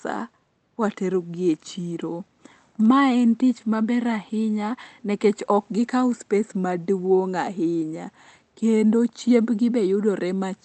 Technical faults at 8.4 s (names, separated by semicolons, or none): none